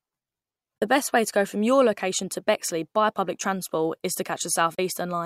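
A digital broadcast dropout strikes this speech clip twice: the receiver failed to decode a frame, which fits a single lost frame each time, and muted until clean data resumed. The result is a brief hole at 0.78 to 0.82 s and again at 4.74 to 4.79 s, each with an 8 ms fade into roughly 32 ms of lost audio before the sound returns further along in the programme.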